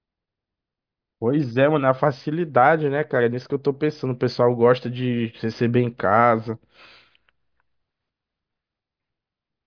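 A recording of speech, with no audible technical fault anywhere in the signal.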